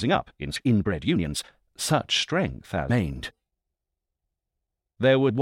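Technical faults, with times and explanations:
0.00–1.53 s, time-stretched section: The pace is about 1.73 times fast and rushed, yet the pitch holds. This was likely caused by software dropping short pieces to shorten it.
0.53–0.56 s, 2.86–2.90 s and 5.30 s, damaged data in a compressed stream: Brief chirps and blips. The decoder misreads corrupted frames, loses sync, then jumps ahead to the next header.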